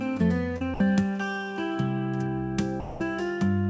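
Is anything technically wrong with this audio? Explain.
Yes. A short concealed packet loss at 0.58 to 0.62 s: about 20 ms never arrived, so the receiver extended the preceding sound and blended back, leaving a brief smear. Sound dropped by the voice detector at 0.74 to 0.80 s and 2.80 to 3.00 s gives way to steady comfort noise for 60 and 200 ms, likely because the sender judged the audio to be background. Across the clip nothing is heard above 8 kHz, which points to a G.722-type call codec.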